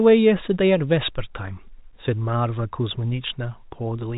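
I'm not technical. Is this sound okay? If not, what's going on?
Yes, it's fine: there's nothing wrong with this speech, and the narrow, phone-call quality comes from ordinary G.711 telephone coding, which leaves out the highest sounds above about 3.8 kHz, just as a normal landline does.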